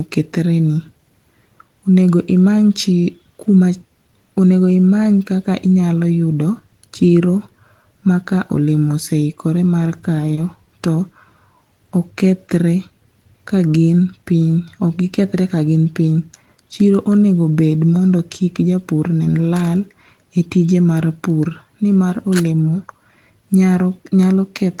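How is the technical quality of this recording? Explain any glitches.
There's one glitch: a short concealed packet loss at 10.35 to 10.39 s. About 20 ms of audio arrived too late, so the receiver patched the gap by extending the preceding sound and then blending back into the real signal. You hear it as a brief smear or wobble.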